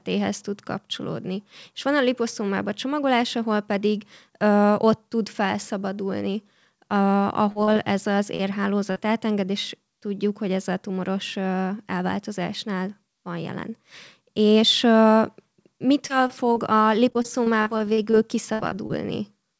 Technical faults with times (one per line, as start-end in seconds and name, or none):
7.52-8.97 repeated packet loss (robotic sound)
16.07-18.91 repeated packet loss (robotic sound)